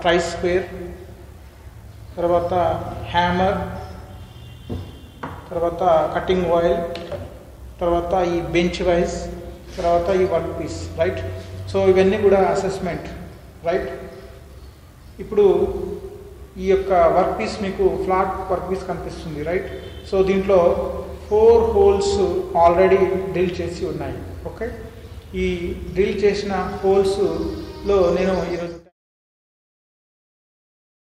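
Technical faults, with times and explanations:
No technical faults detected.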